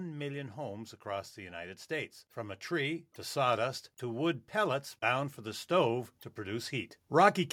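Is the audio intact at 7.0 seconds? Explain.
No. At 7.0 seconds you're right inside an automatic gain rising stretch that runs from about 1.89 to 7.42 s. The gain control decided the input was too quiet and kept nudging its gain up, about 10 dB in all across those five and a half seconds. Since it's the whole signal being scaled, the speech and the background noise swell together, so the room seems to creep closer along with the talker.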